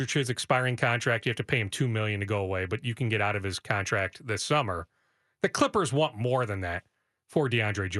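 No technical faults are audible.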